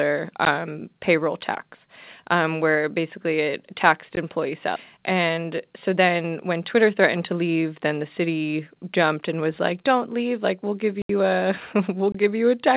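Speech coming through a WebRTC call path on G.711 mu-law, so nothing above 4 kHz and that familiar narrowband coding hiss, with three kinds of fault layered on top. There are four blocks of digital silence: short ticks at 0.45 s (about 14 ms) and 4.16 s (about 15 ms), a 76 ms hole from 11.02 to 11.09 s, and a 23 ms dropout at 12.12 s that fits a 1024-sample buffer. Each one is a hard cut to silence and back, which points to output buffers not being filled in time. At 4.76 s there's a skip ahead where roughly 0.7 s of audio just vanishes and the two sides butt straight together with no gap. That's a stretch thrown away while later audio was already queued up. Right after that, from 4.98 to 7.65 s, you get a jitter buffer speed-up running at about 108%. Pitch stays put but the delivery sounds hurried, because the receiver kept trimming out small pitch-period chunks, about a fifth of a second in total, to bring its backlog down.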